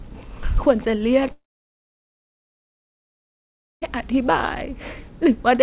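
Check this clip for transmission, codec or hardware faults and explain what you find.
There is one clear transmission fault: a long network dropout in this speech clip, heard through a narrowband call path that carries nothing above 4 kHz.

From 1.32 s to 3.84 s the audio stops, most likely because packets stopped arriving for about 2.5 s. The receiver briefly extends the last sound as a fading buzz or hiss, then leaves about 2.4 s of silence. When sound returns, that stretch has been skipped rather than delayed. A brief packet loss would be a short glitch, and a stall would resume where it left off.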